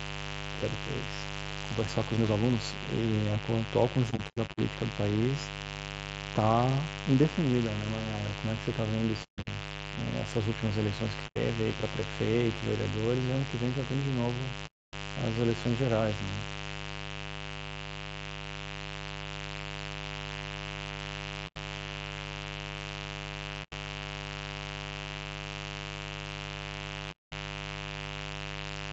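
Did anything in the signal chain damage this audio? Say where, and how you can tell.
Yes. A steady, raspy buzz runs under the whole recording, loud at around 10 dB below the speech. It sits on a 50 Hz fundamental with a dense ladder of harmonics, pointing to the analogue wiring, where a dimmer, rectifier or unshielded cable injects mains buzz.

Throughout, the speech sounds rough and grainy, with noise filling the gaps between harmonics and a thin, synthetic-sounding top band. The damage is plainly audible and most likely comes from low-delay AAC compression (AAC-ELD) at a low rate, perhaps near 32 kbps.

Seven soft-edged dropouts fade out and back in. They occur at 4.10–4.60 s (broken into several gaps), 9.23–9.48 s, 11.27–11.38 s, 14.66–14.94 s, 21.47–21.58 s, 23.63–23.73 s and 27.11–27.33 s. This is AAC frame loss with muting: packets lost on the network, with the decoder zeroing those frames.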